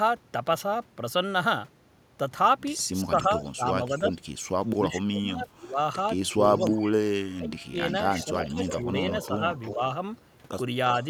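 From 3.04 to 5.78 s the talker's voice repeatedly sinks, by roughly 20 dB at its deepest, across about a second and a half in all. This is speech suppressed in double talk, likely from an echo canceller that turned everything down when both sides spoke. Within that stretch, 3.43 to 4.0 s carries a faint copy of the voice about 350 ms late, some 20 dB below it: an echo leak, likely from a far-end loudspeaker echo slipping past its canceller. The same faint delayed copy returns from 6.29 to 6.91 s. From 7.29 to 9.81 s the voice again dips by around 20 dB for roughly a second in total, likely the same double-talk suppression. Overlapping it, from 7.9 to 9.74 s, the delayed echo is louder, only about 10 dB under the voice and still about 350 ms behind, likely a fuller leak. A last brief scrap of echo, around 25 dB down, sits at 10.94 to 11.05 s.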